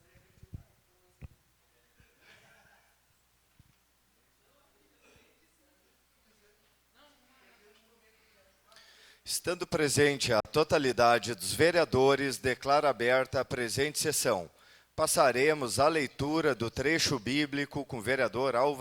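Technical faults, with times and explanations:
10.40–10.45 s, Bluetooth dropout: the audio cuts to silence for about 46 ms and then resumes further along, as though it had kept playing through the gap, so nothing is delayed and that slice is simply missing. The likely cause is packets failing to reach the headphones in time, a gap that fits about two lost packets. On a waveform it is a flat hole; on a spectrogram, a narrow blank vertical stripe across every frequency.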